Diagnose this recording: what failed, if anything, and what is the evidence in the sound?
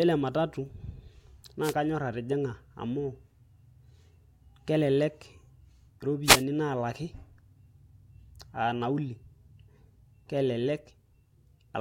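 Two brief bursts of hiss cut across the speech, the first from 1.63 to 1.74 s, just before "atijing'a amu", and the second, longer, from 6.25 to 6.43 s. Each is a short swish of static over the voice. This is a wireless microphone noise hit in the analogue radio link ahead of the converter. The FM signal momentarily faded as reflected paths cancelled it, so the receiver's noise rose up over the audio until the signal recovered.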